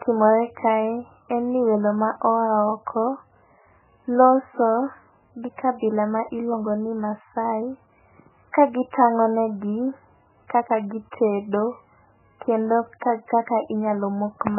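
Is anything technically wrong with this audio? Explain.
Yes. Throughout the speech there is heavy damage that is likely from MP3 compression. Nothing is heard above about 2.9 kHz, and the remaining sound is watery and swirling. Consonant attacks are smeared. This points to a very low bitrate, on the order of 8 kbps. The encoder runs out of bits, so it cuts the treble and drops weak frequency lines, which flicker on and off between frames. A plain low-pass filter would dull the sound in the same way but would not produce that shifting, swirly texture.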